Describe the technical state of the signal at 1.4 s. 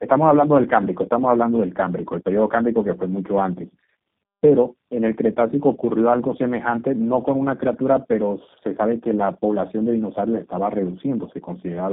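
At 1.4 s the speech carries tandem speech coding, present across the whole clip. It sounds like three successive speech codecs, each re-coding the previous one's degraded output, leaving rough, muffled, warbly speech with nothing above 3.8 kHz.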